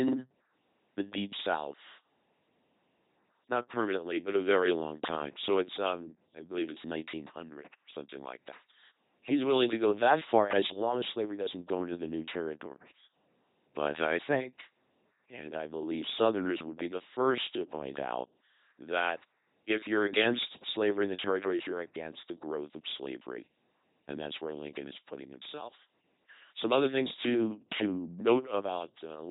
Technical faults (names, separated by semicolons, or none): LPC-10 vocoder